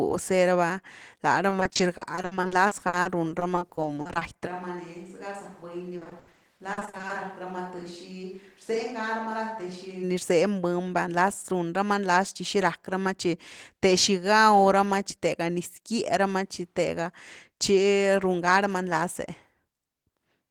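Speech that turns choppy and robotic from 1.49 to 4.23 s, right after "raba lá": short holes keep breaking up the sound, each patched by stretching the last fragment, so the voice takes on a stuttering quality. This is repeated packet loss. Audio packets went missing or arrived late over and over, the concealment filled each gap, and the filled pieces add up to 780 ms, more than a quarter of that stretch, with the longest single gap at 60 ms.

From 4.48 to 10.02 s the voice suddenly turns hollow and roomy, thinner in the bass, around 10 dB quieter, with room noise sitting some 30 dB below the speech. It then snaps back just as abruptly. The likely cause is a switch to a distant microphone, with the recording falling back from the close mic to one farther away.

Inside that stretch, from 5.97 to 7.11 s, the robotic chop of repeated packet loss returns and is heavier this time. Concealed audio totals 420 ms, over a third of the span, and the longest gap is 80 ms.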